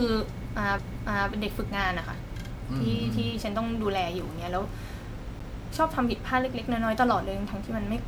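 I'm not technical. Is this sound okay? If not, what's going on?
No. Two problems can be heard in this speech.

The first runs through the whole clip. The voice sounds swirly, smeared and a bit hollow, and the starts of sounds are blurred. This is generation loss. The likely cause is that the recording was squeezed into MP3 and unpacked again about five times. Each round adds a little new damage in slightly different places. The damage piles up into this washy, watery sound.

The second is a CD skip, heard twice, at 0.78 s and at 5.39 s. Each time there is a small tick and a very short silence, a hundredth of a second at most. Then the speech carries on from a different spot. The laser reading the disc has jumped to another turn of its spiral track, so a short piece of the recording is skipped or repeated.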